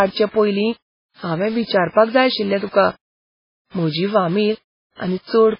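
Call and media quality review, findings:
Low bit depth without dither, throughout: gritty, signal-following distortion on speech, noise roughly 25 dB below it; likely undithered rounding to about 6 bits, so error tracks the waveform.

MP3 compression, throughout: heavy watery, swirling artefacts and smeared attacks, nothing above 5.3 kHz; likely a very low bitrate encode, around 16 kbps, with weak frequency lines dropped frame to frame.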